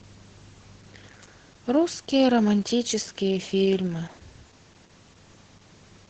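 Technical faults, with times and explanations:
Throughout, Opus voice compression: the speech sounds muffled above 8 kHz, hoarse and slightly robotic from coarse SILK excitation coding, which fits a bitrate around 10 kbps. A plain low-pass filter would not add this hoarseness.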